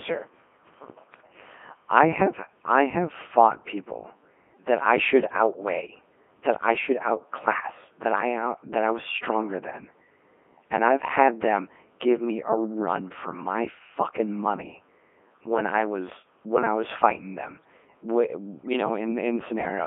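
Throughout, a Codec 2 vocoder rebuilt the speech from sine waves at a rate that fits 3.2 kbit/s. The result sounds heavily robotic and buzzy, confined to 200 Hz–3.4 kHz.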